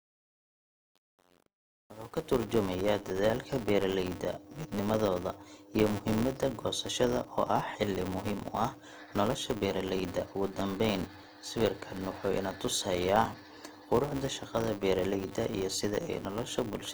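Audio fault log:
Throughout, Opus compression: the speech sounds grainy and rough rather than swirly, with the full band kept. This is likely Opus in its music mode at around 24 kbps, filling starved bands with noise instead of leaving MP3-style holes.
Throughout, filter restarted on every block: a steady 200 Hz buzz rides on the speech and rises and falls with its level. Each 5 ms block starts with a small transient from a filter that has lost its state. Unlike mains hum, its loudness tracks the signal.
0.00–2.43 s, truncation distortion on a fade: the fade-in is gritty through 2.38 s. Its quiet start is reduced to a few coarse square steps without dither, which fits an 8-bit gain stage.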